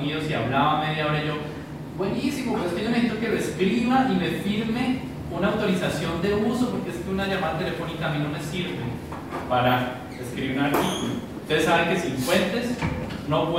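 From about 5.49 to 8.03 s there's crude rate conversion, with samples simply dropped rather than filtered, which fits a 48 kHz to 44.1 kHz change. The repeating error sits roughly 30 dB down and comes through as a gritty, inharmonic fizz riding on the louder, brighter sound.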